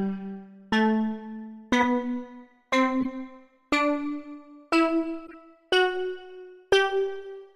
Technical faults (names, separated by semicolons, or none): corrupt frame decoded